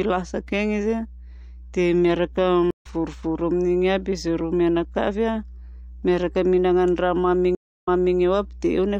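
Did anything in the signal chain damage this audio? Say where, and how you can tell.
Yes. A steady mains hum at 60 Hz sits under the speech for the whole clip, at roughly 20 dB below the signal. This points to the analogue wiring stage, where a ground loop or a nearby transformer let the power line couple into the signal. On a spectrogram it appears as an unbroken horizontal line at 60 Hz running from start to finish, unaffected by pauses in the speech. In pauses, the waveform shows a regular low-frequency ripple.

There are two stream reconnects, which are faults in the network stage. At 2.71 to 2.86 s the audio drops out for 90 ms and resumes slightly later in the stream, skipping about 50 ms. At 7.55 to 8.17 s a 254 ms silence is followed by a restart 366 ms earlier, so that stretch repeats. Each time the connection broke, the player reconnected and started a fresh decoder in mid-stream, and the first frames come in muted or faded. 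The waveform shows a flat gap, then a ramp back up.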